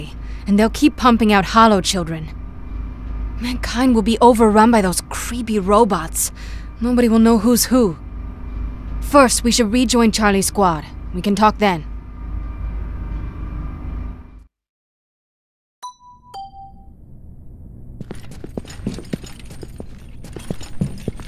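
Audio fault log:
No technical faults can be heard anywhere in the recording; the signal stays continuous throughout.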